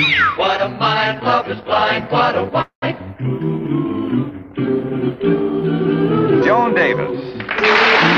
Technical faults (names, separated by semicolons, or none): call audio freeze